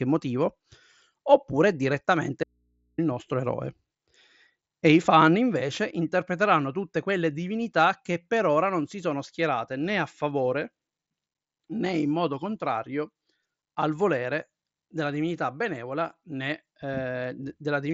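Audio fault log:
2.44–2.98 s, audio dropout to a faint residue: the speech cuts out abruptly for about 0.55 s, leaving only faint mains hum, likely from a live input that lost its signal.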